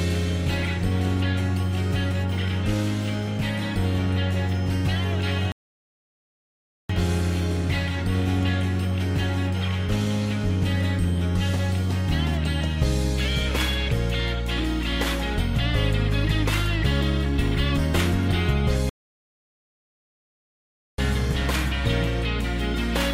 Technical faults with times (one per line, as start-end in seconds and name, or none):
5.52-6.89 rebuffering stall
18.89-20.98 rebuffering stall